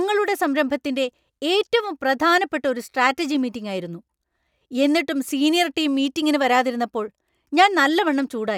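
No technical faults can be heard anywhere in this recording.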